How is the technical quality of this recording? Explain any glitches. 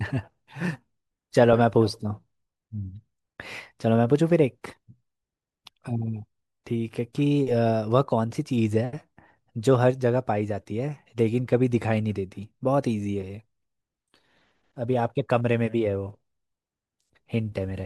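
No technical faults turn up anywhere in the recording, so the speech signal has nothing to explain.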